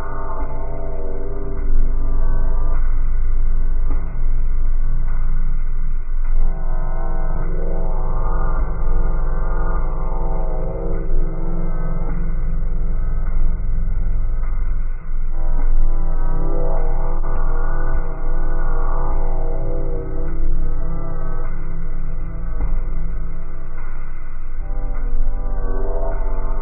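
Gap between chunks at 7.35 s and again at 17.36 s: the audio was delivered in pieces ten seconds apart, and at each join a short stretch of silence, about 7 ms, sits between the end of one piece and the start of the next. Nothing is lost from the sound itself; it simply stops and resumes. Each gap is heard as a tiny dropout, a brief hole that recurs on that fixed ten-second spacing.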